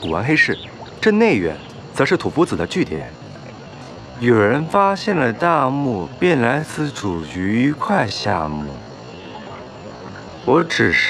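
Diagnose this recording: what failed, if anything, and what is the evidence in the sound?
A time-stretched section runs from 2.86 s to the end: the pace abruptly halves while pitch holds, so the audio drags. This likely comes from a software stretch at the processing or playback stage, slowing audio to 0.5x by repeating short segments.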